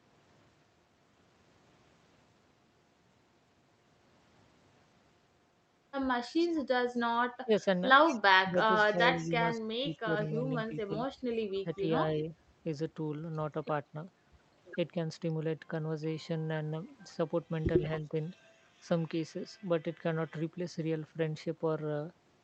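Speech suppressed in double talk runs from 7.44 to 12.27 s. The level dips in patches adding up to about a second, at worst by about 15 dB. The likely cause is an echo canceller that, with both sides talking at once, could not tell the near talker from the loudspeaker echo and turned both down. Shorter dips follow at 13.91 to 13.95 s and 18.01 to 18.15 s, each about 10 dB deep.

Echo leak overlaps that stretch from 8.07 to 9.28 s. A copy of the voice trails it by 174 ms at about 15 dB below the speech, and a faint scrap at about 35 dB down returns from 11.49 to 11.6 s. It is likely that the far end's loudspeaker sound reached its microphone and its canceller left part of it in, sending it back down the line.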